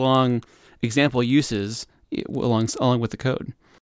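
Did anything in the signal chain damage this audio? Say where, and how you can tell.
Yes. The damage is at the sample-rate conversion stage, from 0.0 to 2.5 s, where a resampler restarted on every block. Each 50 ms block was converted without its neighbours, so every block edge carries a small error. This is heard as ticking at 20 Hz over the speech, present only while there is signal. A spectrogram shows thin vertical broadband lines every 50 ms, and the waveform shows small discontinuities at the same spacing.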